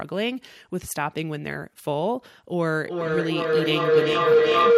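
From 2.8 s to the end, a feedback howl near 500 Hz swells to about 9 dB above the speech, pulsing roughly every 400 ms, growing rather than fading like echo.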